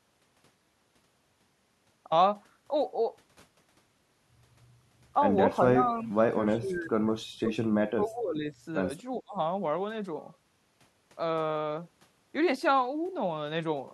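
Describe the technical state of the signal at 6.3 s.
The speech dips sharply from 6.32 to 6.36 s, falling by about 15 dB for a brief stretch before recovering. This is likely speech suppressed in double talk: with both sides talking at once, the echo canceller mistook this talker for loudspeaker echo and turned it down.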